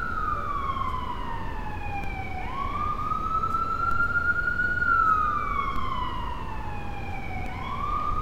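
A recording of everyday sound, marked by four DC steps at 2.04, 3.91, 5.76 and 7.46 s. Each time the zero line jumps by about -23 to -24 dBFS and then drifts back, as a 2 Hz high-pass bleeds the offset away. Each step is heard as a low thump, while the sound itself carries on unbroken, which distinguishes it from a dropout or splice click.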